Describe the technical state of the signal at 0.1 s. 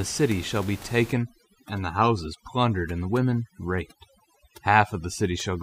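At 0.1 s the signal is intact, with only the room's own background noise, about 19 dB below the speech, present beneath it.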